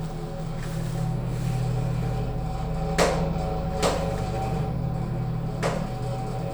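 Nothing here trips the ear as a technical fault, so there's nothing to flag in this bit of everyday sound.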